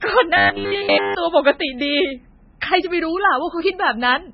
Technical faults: MP3 compression; robotic sound from repeated short buffers

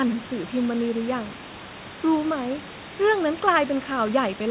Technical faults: none

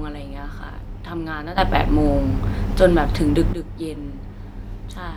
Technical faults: sudden gain jump

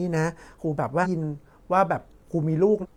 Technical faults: damaged data in a compressed stream

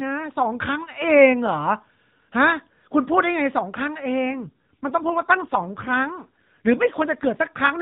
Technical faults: AMR rate drop

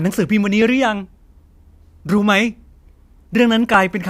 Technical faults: clock drift buffer slips

